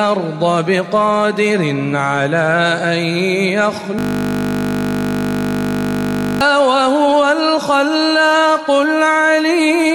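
From 3.99 to 6.41 s a system hang loop takes over: the machine froze while the sound hardware kept replaying one 20 ms stretch of its buffer, over a hundred times. That exact repetition gives a steady 50 Hz buzz, not the irregular chopping of dropouts.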